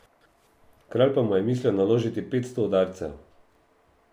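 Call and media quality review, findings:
Crude rate conversion from 1.06 s to end: unfiltered linear interpolation, consistent with 32 kHz to 48 kHz, aliasing images into faint inharmonic fizz tracking loud, bright speech.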